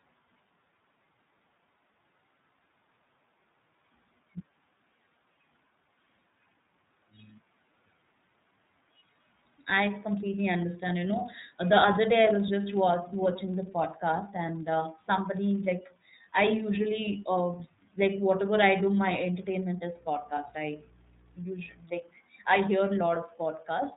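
From start to finish the speech sounds narrow, slightly rough and synthetic, with nothing above 3.8 kHz. This is iLBC codec damage. Each 30 ms frame's excitation is coded on its own, which fits the codec's lower-rate mode of about 13 kbps.

From 19.67 to 21.84 s a steady low 60 Hz drone sits under the speech, roughly 25 dB below it. This is mains hum, where the power line leaks into the signal through a ground loop or a nearby transformer.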